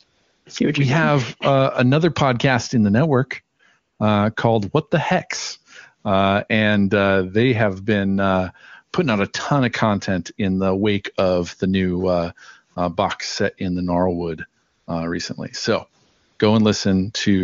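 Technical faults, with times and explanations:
0.03–0.45 s, 3.57–3.59 s, 3.79–3.99 s, 14.63–14.87 s, 16.05–16.39 s, AMR comfort noise: the real background drops out and a smooth, even hiss takes its place, switching in and out. Two brief patches follow "podcast in the network". The phone judged these pauses silent, stopped sending speech frames for 20 to 420 ms, and the receiver generated stand-in noise from a rough level and spectrum description. The surrounding wideband speech sounds clean, which fits a high AMR-WB rate.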